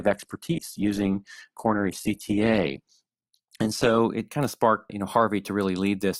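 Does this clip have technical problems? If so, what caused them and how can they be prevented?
Yes, there's an adaptive stream starting at a low bitrate. From 0.0 to 4.0 s the speech sounds thin, with nothing above about 12.2 kHz and stronger codec artefacts. That fits a low-rate Opus version, something like 12 kbit/s. At 4.0 s the quality jumps up with no gap, consistent with a step to around 64 kbit/s once the player had sized up the connection. To prevent it, have the player start on a higher rung or buffer a moment longer before playing.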